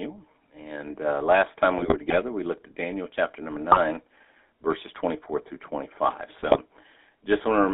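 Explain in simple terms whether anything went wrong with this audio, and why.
The speech passed through a GSM full-rate codec, the original mobile-phone voice coder. It doesn't send the sound itself; it sends a rough model of the speaker's mouth and throat, driven by a simplified train of pulses, and rebuilds the voice from that. Only the band from about 300 Hz to 3.6 kHz survives. So the whole recording sounds thin and phone-like, with a plainly audible buzzy, gravelly roughness.

On top of that come GSM bit errors, where the radio link corrupted some of the transmitted data. When the decoder receives wrong values for the voice model's shape, pitch or loudness, it rebuilds garbled sound for those moments. The voice breaks into squawks, pops and gargling at 1.78 to 2.17 s (right after "uh last time", before "we looked at"), briefly at 3.72 to 3.78 s (just after "chapter number"), and again at 6.36 to 6.57 s.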